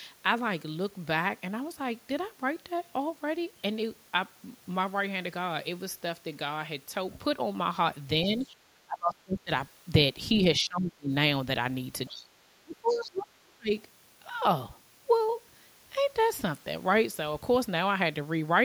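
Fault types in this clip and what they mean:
Other side's voice leaking through: At 8.28 to 8.5 s, 12.06 to 12.1 s and 12.88 to 13.23 s, a second voice surfaces faintly under the speech, at about 30 dB below it, rising to about 20 dB below in the last stretch. This is likely residual echo: the far end's audio played from the loudspeaker reached the microphone, and the echo canceller left scraps of it behind.
Speech suppressed in double talk: From 8.37 to 9.51 s, 10.58 to 11.1 s and 12.1 to 13.74 s, the speech sinks sharply, by roughly 25 to 30 dB at its deepest, for around a second, half a second and a second and a half. The first and last dips coincide with the leaked voice, so both sides were likely talking at once and the echo canceller turned down the near talker along with the echo.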